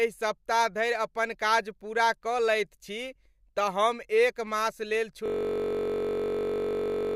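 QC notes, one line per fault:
5.26–7.15 s, system hang loop: a 21.33 ms slice repeats to the end as a steady 46.9 Hz buzz, which fits a frozen 1024-sample ring buffer.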